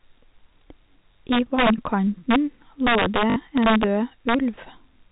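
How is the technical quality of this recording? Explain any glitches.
The recording has two technical faults: repeated integer overflow on loud passages and one short dropout concealed by packet repetition. The audio comes through a telephone-band G.711 mu-law path, so nothing above 4 kHz is present.

Integer overflow occurs at 1.32–1.87 s (peaks about 5 dB over the limit), 2.31–2.36 s (about 1 dB), 2.87–3.84 s (about 3 dB) and 4.29–4.34 s (about 1 dB). When the summed or amplified samples exceeded the largest representable integer, they wrapped around to the opposite extreme instead of saturating. Each overshooting peak jumps across the full range, producing harsh, violent cracks much sharper than ordinary clipping.

Packet loss with last packet repeated occurs at 3.30–3.36 s, inside the third overflow stretch. About 60 ms of audio went missing, which fits three 20 ms packets. The receiver filled the gap by replaying the last good packet until fresh data arrived. 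The repeated block doesn't align with the waveform's period, so the run takes on a brief 50 Hz buzz, heard as a short robotic stutter.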